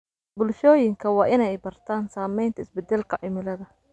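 No audible technical faults occur anywhere in the recording.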